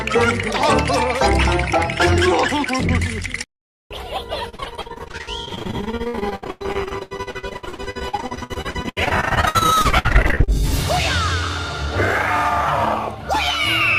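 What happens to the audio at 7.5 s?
At 7.5 s the sound is in the middle of repeated packet loss (robotic sound), running from 4.49 to 10.49 s. Short holes keep appearing, up to 100 ms long, and each is patched by stretching the preceding sound, so about 43% of the stretch is concealed. It comes out choppy, with pieces missing. A spectrogram shows repeated smeared, flat-looking blocks where detail freezes, and the waveform shows abrupt, repeating chunks.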